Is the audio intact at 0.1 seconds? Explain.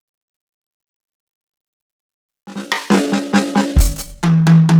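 Yes, at 0.1 s the music plays through intact, with no dropout, click, distortion or other fault audible at that moment.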